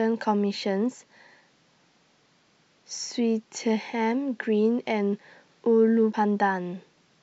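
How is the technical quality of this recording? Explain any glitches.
There is one glitch in the speech. Damaged data in the compressed stream at 6.10 to 6.14 s makes the decoder misread frames and lose sync, producing a brief glitch.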